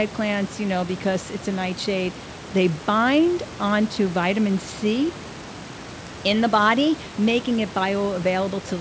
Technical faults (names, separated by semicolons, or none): none